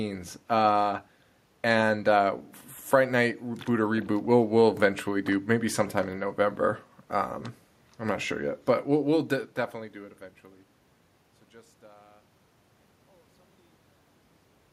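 Nothing stood out on listening to this speech recording, and the level eases away smoothly over roughly its last five or six seconds.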